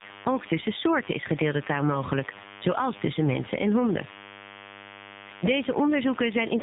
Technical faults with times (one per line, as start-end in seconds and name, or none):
0.00-6.63 DECT cordless phone buzz
0.00-6.63 tandem speech coding